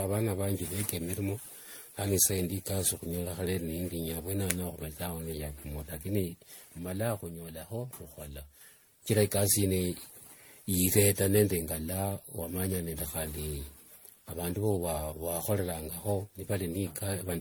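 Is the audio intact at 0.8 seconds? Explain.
No. At 0.8 seconds, as throughout the speech, there is generation loss: the sound is swirly, smeared and hollow, consonant attacks are blurred, and nothing remains above 19.9 kHz. The cause is likely repeated MP3 decoding and re-encoding, around ten passes at a rate that sounds near 96 kbit/s. Each pass requantises on a shifted frame grid, so noise and spectral holes accumulate. A single low-bitrate encode would sound less hollow and smeared than this.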